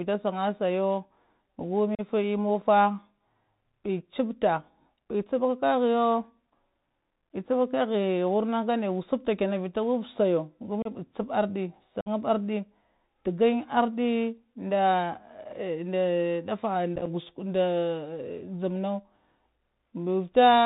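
Speech carried over a Bluetooth headset link shows the Bluetooth CVSD headset codec throughout. The bandwidth stops near 4 kHz, s sounds come out scratchy, loud high-frequency energy distorts where the adaptive step cannot keep up, and a granular hiss sits under the speech, all consistent with a 64 kbit/s one-bit delta-modulated stream. Unconcealed Bluetooth headset packet loss punches abrupt holes at 1.95 s (about 37.5 ms), 10.82 s (30 ms) and 12.01 s (52.5 ms), each a handful of voice packets replaced by silence or an idle pattern, with a briefly quieter recovery. At 16.96 s the loss is scattered over about 105 ms in runs of at most 7.5 ms, which sounds like a short burst of crackle rather than a clean gap.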